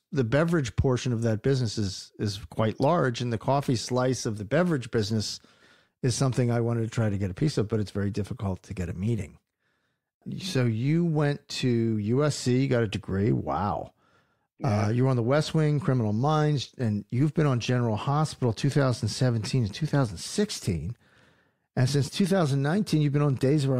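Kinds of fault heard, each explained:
Nothing to flag here: there are no audible faults anywhere in the recording.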